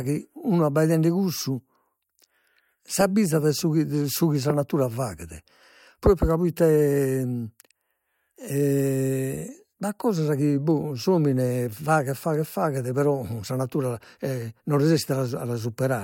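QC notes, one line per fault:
No faults found.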